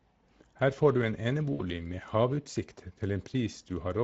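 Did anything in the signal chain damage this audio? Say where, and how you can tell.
Yes. Throughout, the speech sounds hoarse and grainy with a noisy top end, the codec-stage damage of the Speex codec. Its starved excitation fits a mid-rate mode near 16.8 kbps.

From 1.53 to 1.62 s, just after "får du", the sound smears into a fading buzz or coloured noise. This is network packet loss concealed by the speech codec, about 60 ms extrapolated, consistent with three lost frames.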